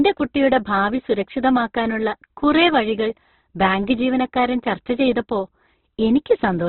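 A speech recording that sounds narrow and boxed-in from start to finish, with nothing audible above about 4.1 kHz, and with a rough, grainy texture clinging to every sound. The likely cause is heavy Opus compression in its music-oriented mode at a very low bitrate, around 12 kbps, where the encoder shrinks the bandwidth and fills starved bands with folded or noise-like energy, so harmonics come out rough and gritty.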